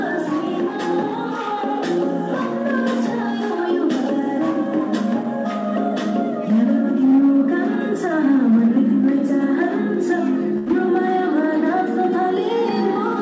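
At 10.58 to 10.69 s there is a burst of packet loss: several packets failed to arrive in time, so the receiver extended the preceding sound for 80 ms while fading it down. The audio then jumps ahead with 90 ms missing, within a call path that carries nothing above 8 kHz.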